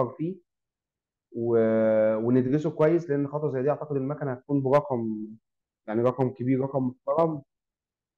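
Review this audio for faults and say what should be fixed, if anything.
Brief crackles break up the loudest speech peaks at 0.00 s, 2.37–2.39 s, 2.81–2.87 s, 4.73–4.78 s, 6.06–6.22 s and 7.18–7.23 s. This is hard clipping. On each peak the signal exceeds what a converter or number format can carry, by about 1 to 4 dB, so the waveform tops are sheared flat. Those flat edges add high harmonics, heard as short bursts of grit rather than continuous fuzz. The worst are at 4.73 s (about 4 dB) and the longest around 6.1 s. To prevent it, lower the input or processing gain so that peaks keep a few decibels of headroom below full scale.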